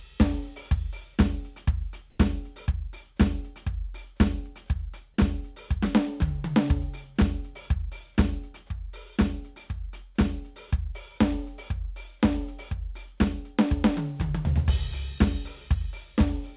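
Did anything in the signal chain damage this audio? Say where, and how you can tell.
Yes. From 2.1 to 2.18 s, an 80 ms stretch of the quiet background, sitting about 35 dB below the loud passages, turns into a flat, featureless hiss about 7 dB off the surrounding level, then the real background returns. This is likely comfort noise in place of the background, introduced in call processing. Discontinuous transmission paused the sender, and the receiver filled the gap with synthetic noise in the RFC 3389 style. The narrowband G.711 path carries nothing above 4 kHz.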